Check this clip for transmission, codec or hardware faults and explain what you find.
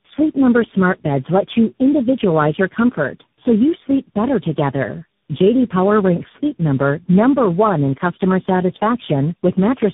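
The speech shows tandem speech coding, audible across the whole clip. The sound seems to have passed through several different speech codecs in a row, perhaps four, each decoding and re-encoding what the previous one left. Each stage adds its own errors on top of earlier damage. The result is rougher, more muffled and more warbly than any single codec would make it. Nothing is present above 3.7 kHz, which fits narrowband telephone links.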